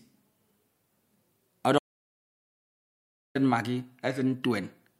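At 1.79 s the speech cuts off mid-flow and the audio drops to silence until 3.35 s, a gap of about 1.57 s. This is an audio dropout to silence. The input likely disconnected or was muted while recording continued, so silence was written. Unlike a natural pause or a noise gate closing, no room tone or fade remains: the floor falls to nothing abruptly, and whatever was spoken in that span is simply gone.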